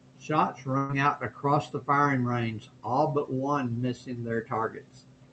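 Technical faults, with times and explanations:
0.77 to 0.91 s, burst of packet loss: just before "out across the firing", the sound freezes into a held, fading tail for about 120 ms. Consecutive packets were lost or arrived too late, so the receiver extended the last audio, then resumed further on, skipping that stretch.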